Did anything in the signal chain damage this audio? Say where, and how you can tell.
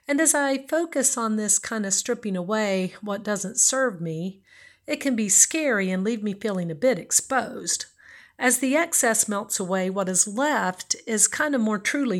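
No, nothing audible in this speech points to damage at any stage of the signal chain.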